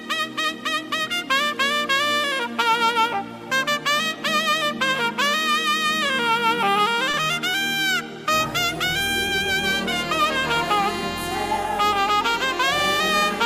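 At 7.11 to 7.15 s, a short concealed packet loss: about 20 ms of audio failed to reach the decoder in time, and the receiver patched the gap by extending the preceding sound before blending back into the real signal, leaving a brief smear or wobble.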